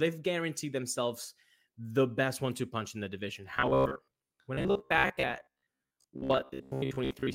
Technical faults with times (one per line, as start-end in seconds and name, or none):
3.51-7.35 robotic sound from repeated short buffers